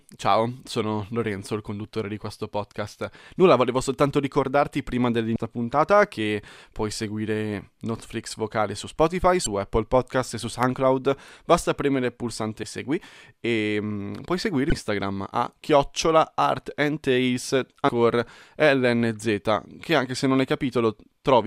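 Damaged data in a compressed stream first appears at 5.35 s, between "volevo soltanto ricordarti prima" and "puntata che puoi seguire", then at 9.43 to 9.46 s. Corrupted frames there make the decoder misread the data, lose sync and search for the next frame header. Each spot sounds like a brief chirp or blip in the speech.

Dropped samples at 10.63 s, just after "e su", produce a single sharp click. A tiny fraction of a millisecond of samples is likely missing, so the waveform jumps straight to a later value.

Damaged data in a compressed stream recurs at 12.63 s, right after "premere il", and at 14.69 to 14.72 s, with the same squawk as the decoder resyncs. Dropped samples then cause another lone click at 15.82 s. The damaged data returns as a blip at 17.88 s, and a final dropped-samples click follows at 18.20 s.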